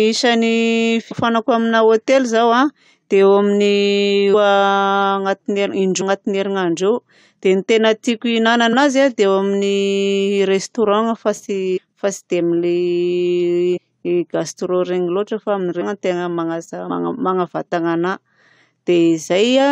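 Compressed frames skipped at 1.10, 4.33, 6.00, 8.72, 11.76, 13.76, 15.80 and 16.89 s: missing or rejected 23.2 ms frames make the speech jump ahead about 0.1 to 0.4 s.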